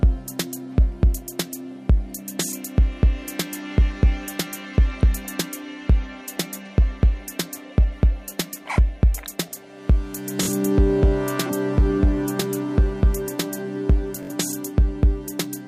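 At 10.43 to 10.48 s and again at 14.23 to 14.31 s, Bluetooth stutter repeats a short slice as a brief buzz while late packets are covered. Unlike a silent dropout, the gap is filled, and the sound resumes about 43 ms and 64 ms further on.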